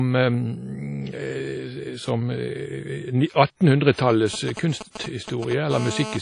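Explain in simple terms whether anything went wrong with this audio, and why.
WMA compression runs through the whole recording. It is likely the cause of the washy, ringing quality and the hiss that rises and falls with the speech. Squeezing the file hard threw away detail, and nothing survives above about 10.1 kHz.

Pre-echo appears at 3.92 to 3.97 s, 4.53 to 4.57 s and 4.90 to 4.95 s. Each time, a short hiss arrives just before a sharp sound. The compressor spread its noise across a chunk of time, smearing it 42 to 55 ms ahead of the attack.

GSM signalling bursts run from 4.10 to 5.53 s as a galloping dit-dit-dit of short 217 Hz buzzes. A nearby 2G phone was exchanging brief radio signals with its network, and the audio circuit turned those pulses into sound.

GSM phone buzz appears from 5.71 to 6.17 s as a hard, raspy buzz at 217 Hz. Here the nearby phone was on a call, transmitting 217 times a second. 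The electronics picked up that steady radio pulsing and made it audible.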